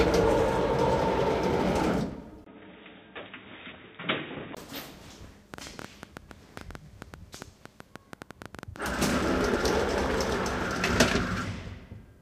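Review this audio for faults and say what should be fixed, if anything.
From 2.44 to 4.57 s the sound goes dull, with nothing above 3.8 kHz, a brief dropout at the switch, a level shift of about 5 dB and a new noise floor. That points to an input switched to a poorer device, likely a fallback mic or headset profile. Pin the input device in the recording settings so it can't hop mid-take.

Between 5.54 and 10.31 s there's a train of clicks, around 9 per second at an uneven pace, roughly 40 pops peaking about 10 dB over the sound. Likely cause is interference or a struggling interface. Keep cables away from other gear and check the interface connection and drivers before recording.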